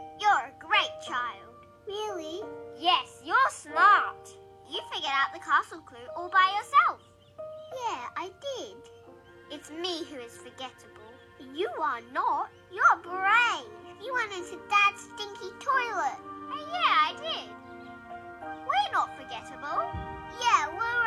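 Nothing stood out as a technical fault on listening to this clip.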